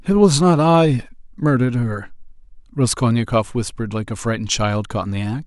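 Speech recording, no technical faults detected.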